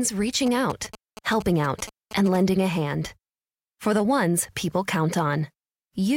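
From 0.46 to 2.37 s, GSM signalling bursts from a nearby 2G phone are rectified into the audio path, producing a galloping dit-dit-dit of brief 217 Hz buzzes, roughly 15 dB under the speech. A spectrogram shows clustered vertical stripes with a 217 Hz harmonic comb.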